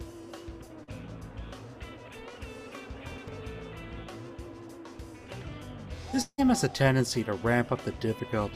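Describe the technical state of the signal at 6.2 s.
At 6.21 s the sound smears into a fading buzz for about 0.17 s, drops to silence for roughly 0.05 s, and resumes at 6.40 s with about 0.16 s gone. A long network dropout is the likely cause, with the receiver filling the gap by extending the last sound.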